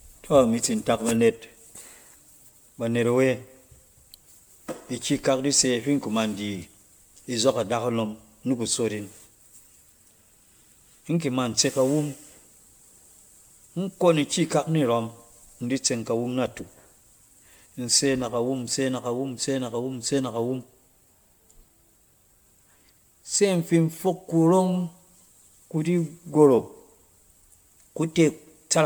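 Throughout the speech, the sound is swirly, hollow and smeared, with blurred consonant onsets, which is likely generation loss from repeated MP3 re-encoding at around 126 kbit/s, perhaps seven passes. Unlike a single low-bitrate encode, the top end stays open to about 20.1 kHz.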